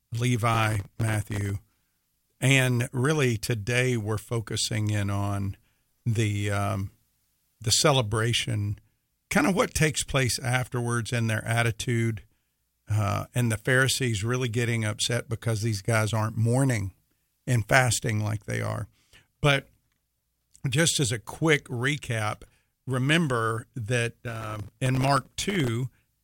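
A gritty crackling burst tears through the speech from 0.54 to 1.50 s, and again from 24.30 to 25.68 s after "quick recap remember that". This is processor overload crackle: dozens of very short buffers missed their deadlines, each leaving a tiny, hard-edged silent gap.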